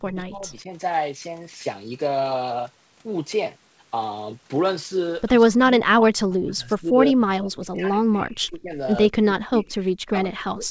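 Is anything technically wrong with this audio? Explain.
Yes, the speech keeps getting pushed down in level, which sounds like speech suppressed in double talk. It happens from 0.03 to 0.71 s, from 5.51 to 8.77 s, and from 9.1 s to the end. When the far end talks over this speaker, the echo canceller can't tell the near voice from loudspeaker echo, so it clamps down on both. That's likely the cause here. The voice ducks by about 20 dB early on and sinks deeper later, about 35 dB and then about 40 dB, dropping out in patches. The top end stops at 8 kHz, which is just the call codec's normal band.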